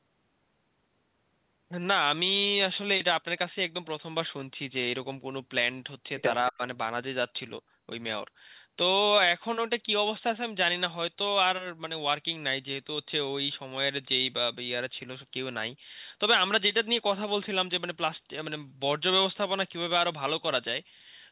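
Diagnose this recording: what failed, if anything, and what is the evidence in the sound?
Call processing stage: from 6.51 to 6.61 s the speech ducks by about 15 dB, around 70 ms in all, then recovers. That's likely speech suppressed in double talk, with the echo canceller mistaking the talker for loudspeaker echo and turning both down.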